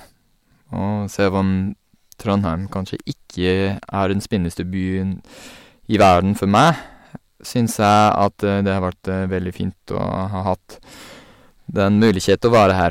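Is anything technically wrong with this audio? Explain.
Yes, there is hard clipping at 2.30 to 2.35 s (about 2 dB over), 5.94 to 6.71 s (about 10 dB), 7.58 to 8.27 s (about 8 dB) and 11.87 to 12.85 s (about 11 dB). A stage overloaded and sliced the speech peaks flat, adding high harmonics: a brief crackle first, then harsh fuzz across the later spans.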